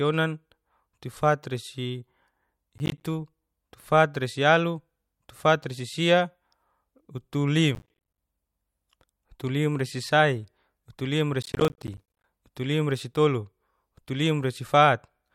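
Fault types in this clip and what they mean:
processor overload crackle: the processor keeps missing buffer deadlines, each leaving a silent gap that fits roughly 10 ms buffers, so the speech tears into three crackle bursts.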